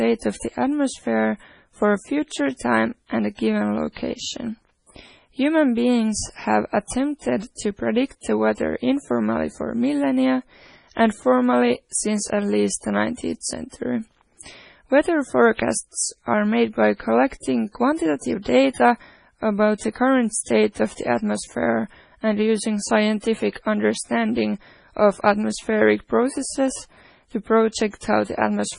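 Throughout the speech there is a watery, swirling quality, with s sounds turning metallic and chirpy, consonant attacks smeared, and nothing at all above 10.6 kHz. This is likely heavy MP3 compression. Short of bits, the encoder cut the treble at a fixed frequency and dropped weak frequency lines, which flicker on and off between frames. The depth of the damage fits a very low bitrate, around 24 kbps.

Pre-echo appears three times, from 13.41 to 13.43 s, at 15.57 s and at 28.01 s. Each time a short hiss runs just ahead of a sharp onset, lasting 23, 17 and 19 ms, and the attack itself sounds soft. The codec spread quantisation noise sized for the loud onset across its whole transform block, so the noise also filled the quiet moment before the attack.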